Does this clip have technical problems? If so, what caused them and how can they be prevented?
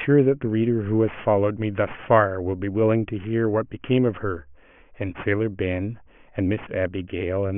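Yes. Aliasing runs through the whole speech clip: sibilants sound gritty and metallic, and energy piles up hard against a 3 kHz band edge. This points to a drop to roughly 6 kHz sampling without filtering. Content above 3 kHz folds back as unrelated tones, roughly 25 dB below the speech. A plain low-pass would only sound dull, not harsh. Applying an anti-aliasing low-pass below 3 kHz before downsampling prevents it.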